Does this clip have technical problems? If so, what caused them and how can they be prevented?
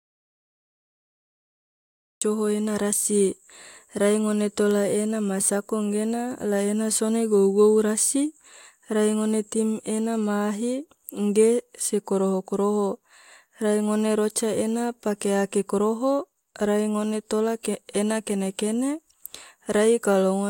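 Yes. The speech opens in an audio dropout to silence that is already under way when the clip starts and lasts until 2.22 s. The gap is silent with no room tone, and the speech comes in mid-flow when the signal returns. The likely cause is that the input was briefly lost through a loose connection, a link failure or a mute while the recorder kept writing samples. Prevent it by securing connectors, confirming input levels before recording, and monitoring the signal continuously.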